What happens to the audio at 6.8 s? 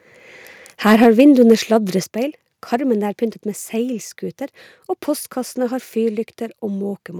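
Nothing goes wrong at 6.8 s; the speech plays through that moment intact, with no dropout, click or distortion.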